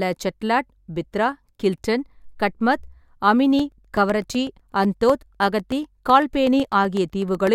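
From 3.59 s to 7.47 s the speech carries a steady train of small ticks, eight per second, one every 0.125 s. These are periodic USB or driver dropouts: something stalls the audio path on a fixed schedule, and each time around a millisecond of signal is replaced by silence.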